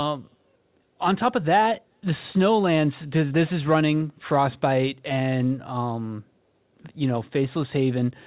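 No technical faults can be heard in this speech recording. It has passed through a call path whose audio stops at 4 kHz, which fits a narrowband telephone codec such as G.711 A-law.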